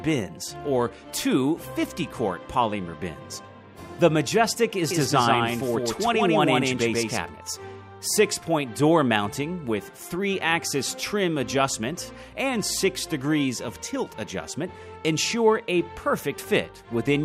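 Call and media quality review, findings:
Doubled audio track, 4.91 to 7.21 s: sound heard twice, a second full-band copy trailing by around 150 ms at roughly equal level, no decay or room colour, cutting in and out abruptly. Likely a second, slower capture path or an edit holding two out-of-step copies.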